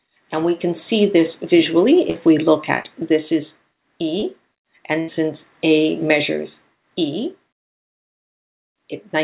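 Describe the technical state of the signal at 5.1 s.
At 5.1 s the audio is just coming out of a brief smeared stretch where the preceding sound is held and fades away. This is a burst of packet loss from 5.00 to 5.10 s: about 80 ms never arrived, so the receiver extended and faded the last sound across the gap. Playback then jumps ahead, with that span missing. The audio there carries nothing above 4 kHz, which fits a G.711 call path.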